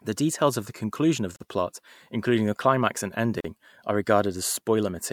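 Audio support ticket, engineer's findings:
Segments encoded separately, joined untrimmed; encoder start delay and last-frame padding left in at each join. Gap at a join of encoded pieces, 1.36–1.40 s, 42 ms, between "of the conclusion of" and "the plot including the". Same fault at 3.40–3.44 s, 40 ms, after "including the climax and". Joins repeat every 2.0 s, so fixed-length segments are suspected. Speech cuts to silence, edges smeared by the codec, then resumes where it stopped.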